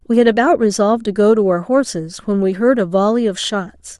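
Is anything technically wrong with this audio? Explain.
No, nothing technically wrong.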